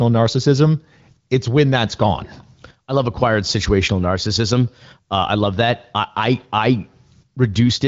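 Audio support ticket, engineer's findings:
No faults found in this speech clip. The audio is band-limited with nothing above 7.5 kHz, consistent with the AMR wideband (HD Voice) codec path, and coding damage is faint at most, which fits its 18.25 kbit/s mode.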